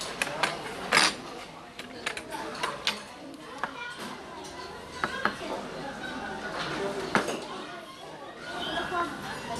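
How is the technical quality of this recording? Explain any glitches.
The technical quality is compromised by audible MP2 compression damage that runs through the whole recording. The top end is missing, with nothing above 12.2 kHz, so the sound comes across dull. Under that sits a gurgling, granular texture, and the upper bands seem to flicker in and out. The likely cause is MPEG Layer II coding at a starved rate, consistent with roughly 80 kbps. At that rate the encoder cannot fund all 32 sub-bands, so it shuts off the highest ones and quantises the survivors coarsely. That coarse quantisation produces the grainy, watery character throughout.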